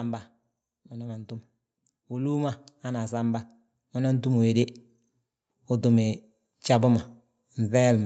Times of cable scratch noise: none

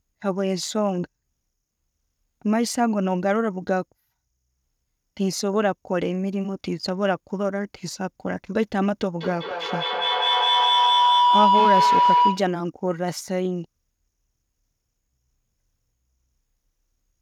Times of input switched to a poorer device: none

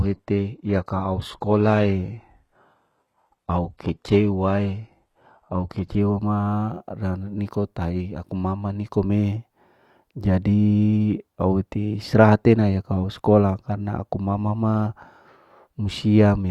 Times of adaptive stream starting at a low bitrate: 0.00-6.00

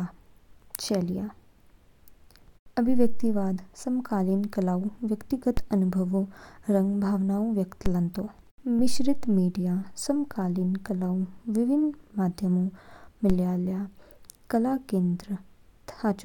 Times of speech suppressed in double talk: none

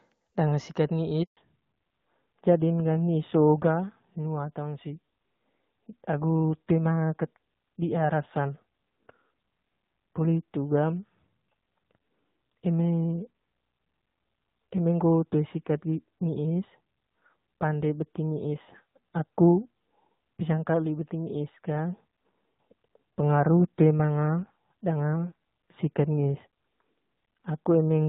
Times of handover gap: 1.23-1.37

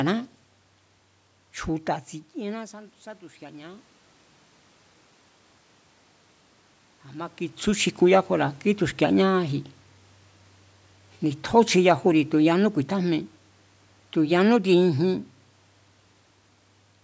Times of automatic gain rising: 2.34-3.93

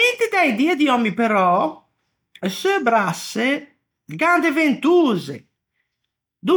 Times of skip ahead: none

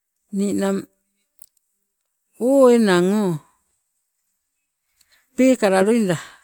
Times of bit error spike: none

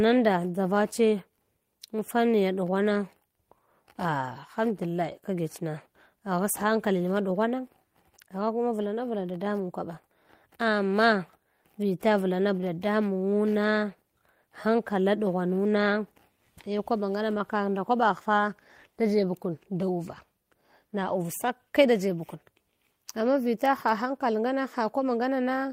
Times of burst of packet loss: none

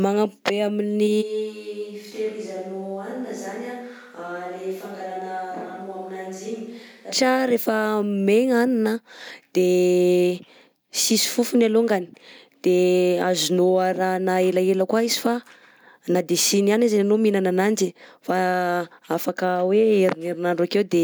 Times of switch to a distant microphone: 1.23-7.10

